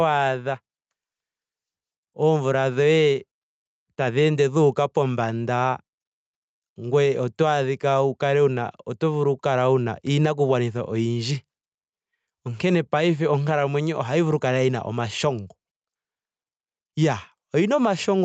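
Throughout this speech clip the level swings by around 5 dB, so loud and quiet passages sit unnaturally close together and the sound feels squashed. This is gain pumping, likely from input gain set far too high for the microphone, with a fast limiter or compressor clamping down on each peak. The band also stops at 8 kHz, consistent with a call codec such as Opus.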